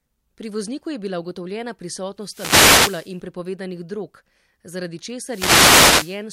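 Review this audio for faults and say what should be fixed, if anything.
Wireless microphone noise hits at 2.19–3.19 s and 5.22–6.23 s: the analogue FM link fades as reflected signals cancel, so receiver hiss swells into static over the speech. Unlike a digital dropout's clean silence, these rise as noise. Use diversity receivers and keep antennas in clear line of sight.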